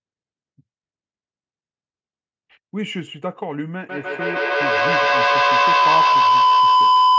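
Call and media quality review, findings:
Feedback howl, 3.89 s to end of clip. Tone near 1 kHz builds instead of decaying, loop repeating roughly every 150 ms, peaking about 10 dB above speech. Probable component: two call devices sharing one room. Acoustic loop gain above unity. Band-limited to 8 kHz by call mic processing.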